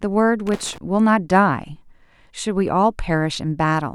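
From 0.47 to 0.78 s the speech is broken by an irregular burst of scratchy crackle. This is loose connector crackle: a worn or dirty contact in the cable path kept making and breaking, chopping the signal.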